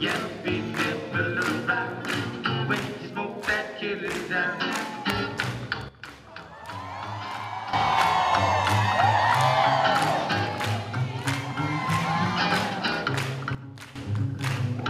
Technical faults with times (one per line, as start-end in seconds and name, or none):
5.89-7.73 sudden gain jump
13.55-13.96 sudden gain jump